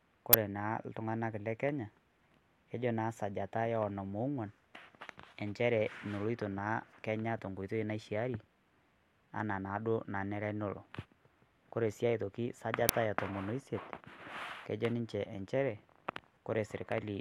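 At 0.33 s and again at 12.89 s you get an uninitialised buffer, stale memory played out as audio, heard as a brief, loud crack, fitting 512- and 256-sample buffers.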